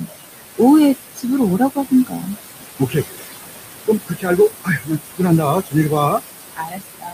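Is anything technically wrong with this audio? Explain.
Yes. Noise suppressor artifacts run through the whole clip. The suppressor pulls the background down by about 19 dB frame by frame, so the room noise, only about 8 dB below the speech, pumps around the voice.

Speech cut by the noise suppressor occurs at 1.16 to 1.26 s, 1.58 to 2.37 s, 2.79 to 3.05 s, 3.86 to 5.21 s, 5.41 to 6.21 s and 6.41 s to the end. In these spans the suppressor treats parts of the speech as noise and attenuates them by about 15 to 22 dB, leaving soft sounds and endings swallowed and faint.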